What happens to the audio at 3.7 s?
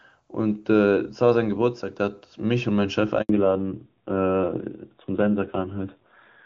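At 3.7 s the call is in a fallback to narrowband. From 3.29 s to the end at 6.45 s the link abandons the AMR wideband (HD Voice) codec, whose earlier stretch sounds clean, for an older narrowband coder, and the result fits AMR-NB at 7.4 kbit/s. Nothing above 4 kHz survives, so the speech loses its crisp upper range and sounds duller, boxier and rougher than before the switch.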